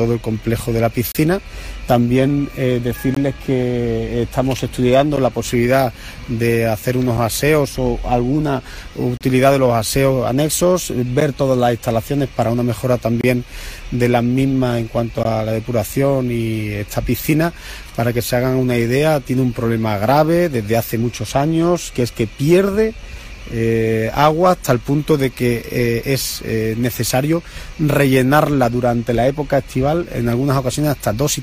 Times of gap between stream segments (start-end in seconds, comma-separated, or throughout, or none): 1.12-1.15, 3.14-3.17, 5.16, 7.17, 9.17-9.21, 11.20, 13.21-13.24, 15.23